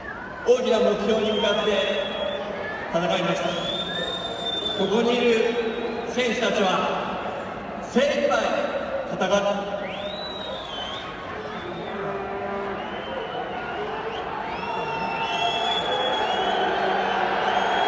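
No technical faults are audible.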